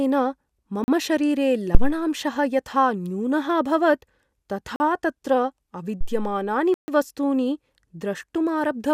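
A speech recording with two separate faults. The first is a block of digital silence, at 0.84 to 0.88 s and 4.76 to 4.80 s (each 40 ms) and at 6.74 to 6.88 s (about 139 ms). The audio drops straight to silence and returns with no fade. The short blocks are heard as short holes and the longer one as a longer hole. That fits an output buffer that was not refilled in time.

The second is a phantom power thump, at 1.75 to 1.97 s and 6.01 to 6.44 s. Each is a deep low-frequency bump that dies away, with a decay of 49 ms in the first and 96 ms in the second. It comes from a supply switching on a live input, and the voltage step passing through the coupling capacitors.

The two are easy to tell apart. The silence blocks remove sound and leave sharp edges. The thumps add low-frequency energy that fades out smoothly, with no gap in the signal.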